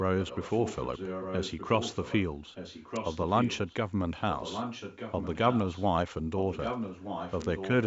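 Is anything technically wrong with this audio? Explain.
Yes. There is an echo leak from 0.2 to 2.22 s, 2.54 to 3.74 s, 4.33 to 5.86 s and 6.38 to 7.85 s. A copy of the speech returns about 1.22 s late, roughly 10 dB below the direct signal and louder, around 5 dB below, in the last stretch. The likely cause is a far-end loudspeaker whose echo canceller failed to remove what its microphone picked up. The band-limited call audio, with nothing above 8 kHz, carries this echo.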